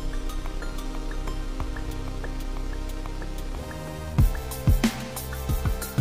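At 3.88 s the sound skips forward abruptly, a tiny sliver vanishing and the two sides butting together with no gap. This is audio missing between chunks, likely from a recorder working in 2.0 s blocks and dropping a very brief piece at the handover.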